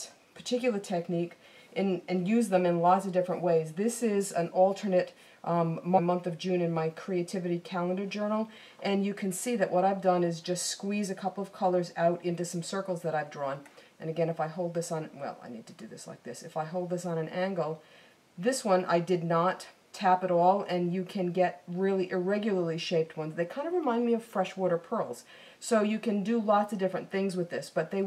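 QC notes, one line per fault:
5.97–5.99 s, damaged data in a compressed stream: a quick blip where the decoder hit bad bytes, lost sync and skipped ahead to the next frame.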